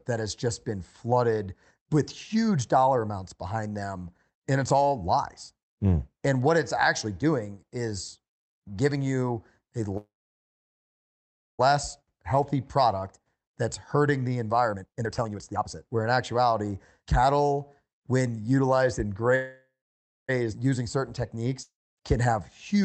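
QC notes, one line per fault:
9.97–11.61 s and 19.35–20.30 s (after "cattle when utilized and", before "using certain"), call audio freeze: packets were likely held up in transit, so the jitter buffer ran dry. The receiver stretches the last sound into a brief fading buzz, then silence, about 1.5 s in the first case and 0.56 s in the second. The speech then resumes where it stopped, so about 1.61 s and 0.93 s of gap are inserted and nothing is lost.
14.73–16.07 s (after "product that's hurting the", before "actuality cattle when utilized"), jitter buffer speed-up: the buffer held more audio than its target, so the receiver repeatedly cut out short pitch-period slices to shrink the delay. Roughly 0.7 s is removed over this stretch, making the speech run at about 149% speed while the pitch stays unchanged. The phrase sounds rushed and compressed without any chipmunk effect.
21.62–21.99 s (after "using certain"), long network dropout: audio likely stopped arriving for a stretch longer than the buffer could cover. 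The receiver fills about 0.35 s with a fading continuation of the last sound that decays to about 0.26 s of silence. When the speech returns, about 0.56 s of it has never been played, so the audio jumps ahead and the timeline ends up about 0.2 s shorter.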